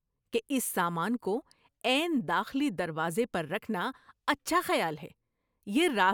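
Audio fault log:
No faults are audible anywhere in the speech.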